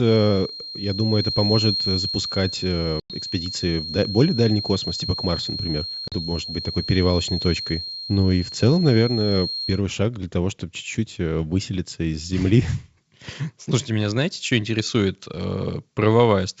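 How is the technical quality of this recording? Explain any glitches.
The recording has two distinct faults: a whistle through the first half and two brief dropouts.

From 0.0 to 9.83 s, ending just before "шаг для того чтобы", a thin 4.2 kHz tone sits about 10 dB below the speech. This is likely a feedback whistle from a loudspeaker-to-microphone loop held at the edge of oscillation. On a spectrogram it appears as a single unbroken horizontal line.

At 3.00 s and 6.08 s there is packet loss on an ADPCM call. About 100 ms and then 40 ms of audio are replaced by silence, which points to about five and then two packets lost. Because the decoder's adaptive state drifts out of step with the sender's, the speech comes back slightly distorted before settling. On the waveform each one shows as a flat, hard-edged gap followed by a short, distorted recovery.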